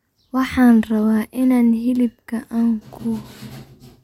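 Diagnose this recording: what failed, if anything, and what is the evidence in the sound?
Nothing in the speech stood out on listening as a fault at any stage of the chain.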